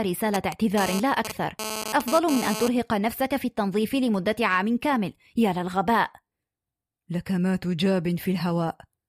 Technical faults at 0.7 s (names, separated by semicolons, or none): GSM phone buzz